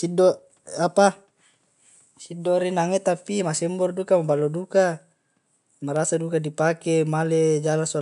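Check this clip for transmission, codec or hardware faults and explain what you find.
The speech signal arrives intact with no transmission, codec or hardware faults, and the only background is the room's own noise, sitting about 50 dB below the speech.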